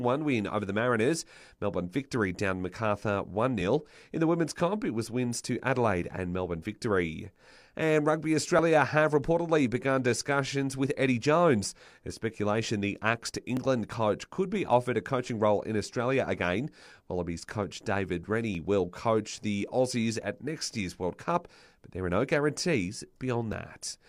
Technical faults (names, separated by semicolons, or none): audio missing between chunks